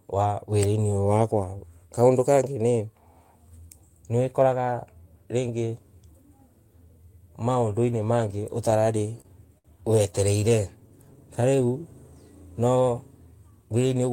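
Speech, with a block size mismatch (truncated) running throughout. The ends of blocks are dropped, giving a steady buzz near 46.9 Hz. That fits 1024-sample blocks at 48 kHz. The pace is not noticeably changed. Repeated stalls (stutter) occur from 8.71 to 9.67 s and from 10.80 to 11.44 s. Packets kept arriving late, so the jitter buffer emptied. The first span has seven gaps filling 140 ms, the longest 65 ms. The second has five gaps filling 49 ms, none over 17 ms. Nothing is lost, but the sound drags and stutters. A short stall from a late packet at 10.40 s holds the sound for 19 ms while the receiver waits. A jitter buffer slow-down runs from 10.49 to 11.73 s. Repeated pitch periods add 79 ms, so the audio plays at 94% speed without a pitch change. A jitter buffer speed-up from 13.68 to 14.12 s cuts roughly 50 ms to shrink the delay. The audio runs at 112% speed at the same pitch and sounds hurried.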